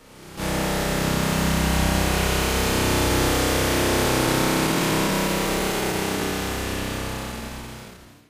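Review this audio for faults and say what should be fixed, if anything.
There's a skip ahead at 0.37 to 0.39 s, where roughly a second and a half of sound was dropped and playback joins straight across with no gap. You'd prevent it by sizing the jitter buffer so it doesn't overflow and discard queued audio.

Then there's a jitter buffer speed-up, twice: 4.67 to 6.32 s at 111% speed, trimming around a fifth of a second, and 7.32 to 8.29 s at 125%, cutting around 0.3 s. Both times, the receiver clipped short pitch-period slices to drain a backlog, so the sound hurries along at the same pitch. Smoother packet delivery or a gentler catch-up rate would prevent it.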